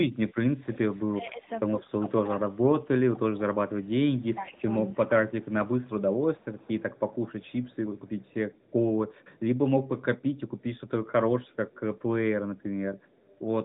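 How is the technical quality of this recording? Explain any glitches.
A faint echo of the talker returns repeatedly from about 4 s to near the end of the recording. At 4.21–4.61 s, 5.43–9.4 s, 10.21–10.8 s, 11.46–12.02 s and 12.57–13.38 s, a delayed copy of the speech trails it by 247 ms, roughly 30 to 40 dB quieter. This is likely echo leak: a loudspeaker at the far end fed the audio back into its microphone, and the echo canceller there let some of it through.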